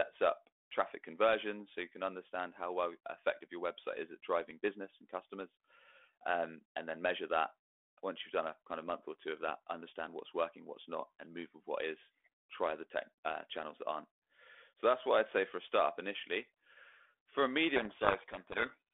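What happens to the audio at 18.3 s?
At 18.3 s the speech is buried under harsh, gritty distortion, part of a burst that runs from 17.76 to 18.78 s, starting right after "for a". This is a codec payload misread: the receiving end unpacks each G.726 code word with its bits in the wrong order. The decoder applies the adaptive prediction to scrambled difference values, so the rebuilt waveform turns to rasping noise until sender and receiver agree on the format again.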